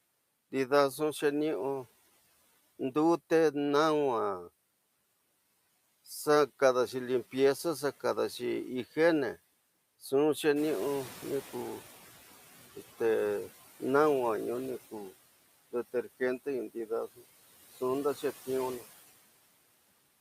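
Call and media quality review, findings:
Noise suppressor catching up, 10.55–12.34 s: room noise jumps about 11 dB near 10.5 s, passes under-suppressed, then sinks about 10 dB over 1.79 s as the noise estimate adapts.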